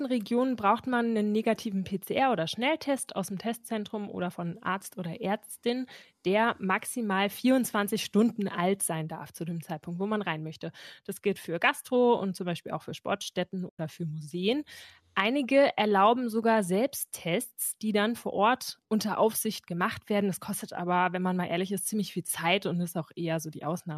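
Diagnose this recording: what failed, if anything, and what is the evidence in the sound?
The fault is AAC frame loss with muting, at the network and decoder stage. The speech drops into a soft-edged hole from 13.69 to 13.79 s. Overlapping windows fade out and back in, and 100 ms fits about ten short frames from the likely low-delay AAC stream.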